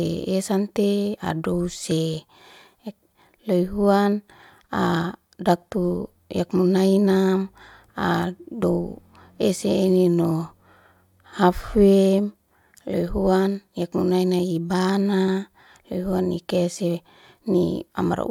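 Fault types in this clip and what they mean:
Compressed frames skipped: at 8.62 s the decoder drops roughly 20 ms of coded speech, so the sound jumps ahead. The waveform shows a discontinuity, and the spectrogram a thin vertical smudge.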